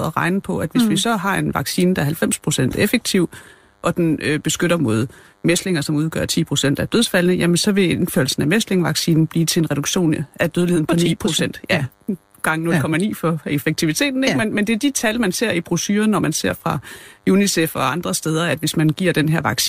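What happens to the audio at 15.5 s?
At 15.5 s the DECT cordless phone buzz continues as it does through the whole speech clip: a thin, faint buzz well below the speech. A nearby DECT handset or base sends a radio burst every 10 ms, which the audio circuitry rectifies into a 100 Hz tone rich in harmonics. That buzzy harmonic edge sets it apart from smooth mains hum.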